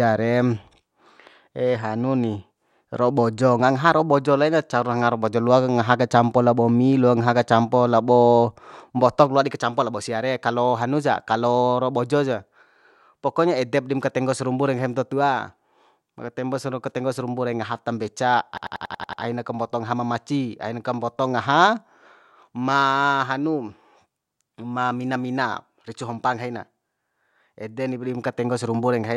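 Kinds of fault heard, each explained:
System hang loop: the computer or its audio driver stalled while the sound hardware kept replaying the last filled stretch of its ring buffer. From 18.58 to 19.23 s, one 92.9 ms fragment of the speech repeats exactly seven times, producing a rattling machine-gun stutter at 10.8 repeats per second. The loop length fits a 4096-sample buffer. Once the system recovers, the speech picks up again with next to nothing missing.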